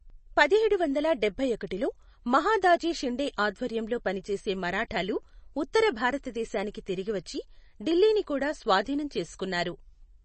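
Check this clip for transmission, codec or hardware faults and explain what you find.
One codec fault runs through the whole speech clip: MP3 compression damage, plainly audible, likely from heavy MP3 encoding at a low bitrate that fits about 32 kbps. Nothing is present above 8.3 kHz, and weak spectral detail flickers between frames, giving a watery, swirling texture. A plain low-pass filter would dull the sound without that swirl.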